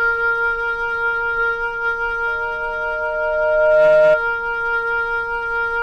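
At 2.27 s a loudspeaker feedback squeal begins: a microphone is picking up the loudspeaker it drives, and around 617 Hz the loop gain exceeds one, so that tone feeds on itself. It swells over roughly one and a half seconds to about 10 dB above the rest of the audio, then stops at 4.22 s. A spectrogram shows a single bright horizontal line at 617 Hz, and the waveform's envelope grows steadily, then holds until it cuts off.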